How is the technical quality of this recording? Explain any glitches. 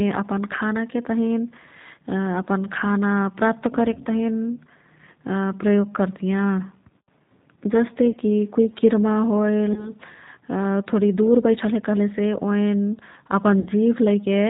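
The quality is limited. The whole speech clip runs through a G.729 codec at 8 kbit/s. Nothing above 4 kHz survives, so the sound is band-limited, rough and slightly synthetic.

VoIP packet loss concealed by the speech codec occurs at 8.11 to 8.18 s, 9.73 to 9.93 s and 13.60 to 13.70 s. The first two gaps fit about 30 ms lost, and the last about 60 ms. The decoder stretches its last sound into a fading buzzy tone or coloured noise, and the audio stays weak or distorted briefly afterwards.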